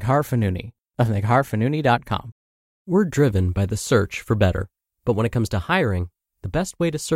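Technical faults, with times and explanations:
Nothing to flag here; I listened closely and couldn't find a single technical problem anywhere in this bit of speech.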